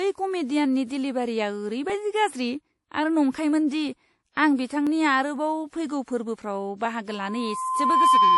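Transcoding between lossy codecs runs throughout: nothing above 11.5 kHz survives, and the stacked artefacts likely come from a WMA encode near 64 kbit/s re-encoded as MP3 near 48 kbit/s.

Periodic USB or driver dropouts tick from 1.90 s to 6.85 s, every 0.496 s, about ten times. Each skips a few milliseconds of speech, as a blocked driver drops buffered audio.

Loudspeaker feedback squeal begins at 7.08 s and lasts to the end. A 1 kHz tone swells over roughly a second to about 10 dB above the speech, as the microphone-loudspeaker loop exceeds unity gain.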